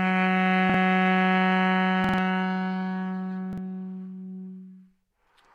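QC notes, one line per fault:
0.70–0.74 s, repeated buffer: one 46 ms block plays twice with a hard join, a short stutter fitting a 2048-sample buffer; about 50 ms of audio lost.
2.04–2.18 s, repeated buffer: the same 46 ms block plays four times in a row, giving a longer stutter as fresh audio failed to arrive; about 150 ms lost.
3.53–3.58 s, repeated buffer: one 46 ms block repeats once at a hard seam, heard as a brief stutter while the device replayed stale data; about 50 ms lost.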